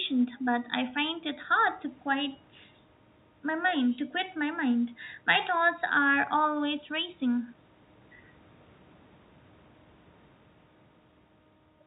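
No technical faults are audible.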